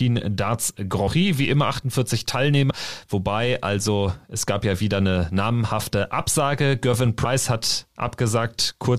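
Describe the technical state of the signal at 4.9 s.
At 4.9 s the speech signal is intact, with no dropout, clipping, glitch or other fault to be heard at that moment.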